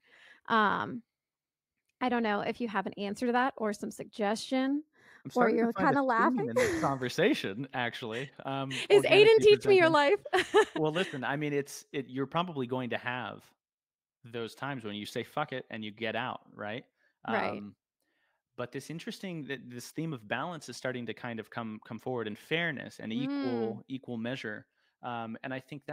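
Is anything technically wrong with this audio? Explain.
Yes. From 4.68 to 7.02 s there's channel delay causing comb filtering. One channel runs a fraction of a millisecond behind the other, so summing to mono cancels evenly spaced frequencies, the first notch landing around 3 kHz. The speech turns hollow and phasey there.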